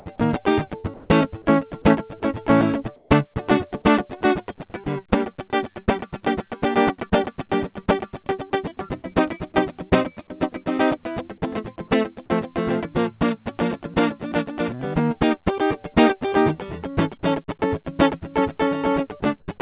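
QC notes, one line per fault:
0.80–3.36 s, 4.58–5.88 s, 8.24–8.52 s and 9.90–10.30 s, sound chopped by the voice detector: the music stutters as quiet passages flip between real sound and flat hiss, about 440 ms replaced in the first stretch, 120 ms in the second, 40 ms in each of the last two. The likely cause is the sender's detector toggling transmission and the receiver filling gaps with comfort noise.
13.94 s and 17.60 s, sound dropped by the voice detector: a 20 ms sliver of music vanishes into steady noise at each point before the sound resumes. The detector likely misread quiet musical detail as background, so the sender paused and comfort noise filled in.
19.40–19.48 s, comfort noise in place of the background: for about 80 ms the quiet bed, sitting about 43 dB under the loud parts, turns into a smooth, featureless hiss about 6 dB lower, within the band-limited sound of the call path that carries nothing above 4 kHz. 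Likely cause: discontinuous transmission, with the receiver synthesising noise shaped loosely like the real background.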